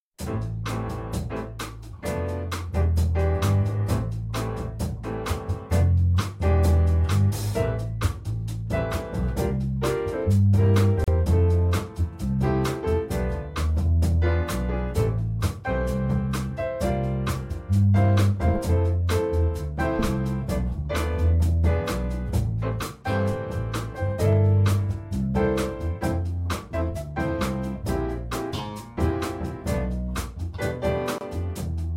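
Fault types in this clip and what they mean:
Gap at a join of encoded pieces: separately encoded segments were joined untrimmed, leaving dropouts of 37 ms at 11.04 s and 27 ms at 31.18 s.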